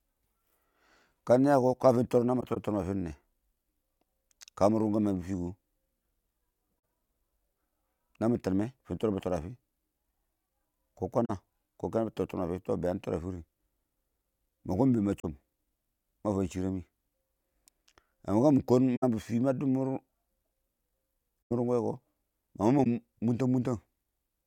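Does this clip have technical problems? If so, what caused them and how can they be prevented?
Yes. Six brief faults from a corrupt frame concealed by the AAC decoder occur at 2.40–2.58, 11.25–11.30, 15.20–15.25, 18.96–19.04, 21.48–21.52 and 22.84–22.87 s. In each, flipped bits ruined frames and the decoder muted or smeared them. These show as vertical gaps or blurred bands on a spectrogram and rounded notches in the waveform. Error-protected transport or retransmission would prevent it.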